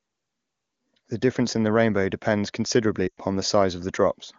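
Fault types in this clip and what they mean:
Lost AMR speech frames: from 3.08 to 3.20 s, about 100 ms of speech is corrupted in transit, so the AMR-WB decoder stretches the last good pitch and vocal tract settings while cutting gain. The sound smears and fades, which fits roughly five 20 ms frames.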